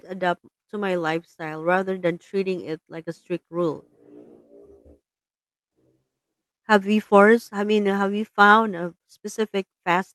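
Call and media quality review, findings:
No faults found; the speech carries the ordinary coding texture of a call path, with the top end rolling off near 12 kHz, which fits an Opus codec at that bandwidth setting.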